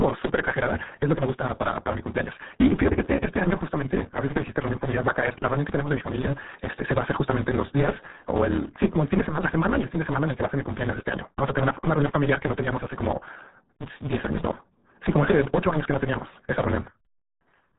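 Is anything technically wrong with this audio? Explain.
Yes, two problems run through the whole speech clip, start to finish.

First, a block size mismatch (truncated). Somewhere in the chain, one stage hands over bigger blocks than the next stage takes in, and the leftover tail of every block gets dropped. You hear that as a steady buzz at 150 Hz, the rate the chopped blocks go by, and the talking rushes along at 1.6 times normal speed while the timbre stays about where it should be. The buzz and speed-up fit 512-sample blocks being written.

Second, the RealAudio 14.4 codec, the old dial-up speech codec. The damage here is heavy: nothing gets through above 3.8 kHz, so the speech sounds muffled and thick, with that gargly, underwater quality. The amount of smearing points to a very low bitrate, around 8 kbit/s, which is what this codec was built to squeeze into.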